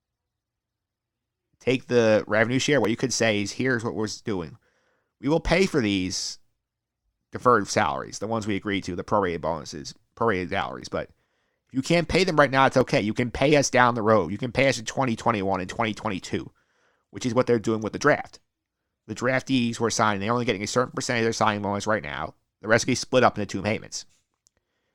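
Overlap between stream segments produces tiny skips at 2.85, 4.84, 6.83 (between "will pay for these" and "deferred salaries the ones"), 10.82 (after "the prorated bonuses prorated"), 12.81 (after "them right now it's") and 14.80 s. The joins sit on a 2-second segment grid. Adjacent segments claim overlapping time, so the player discards a sliver of speech that was never duplicated. The waveform jumps and each join is heard as a brief tick or micro-skip.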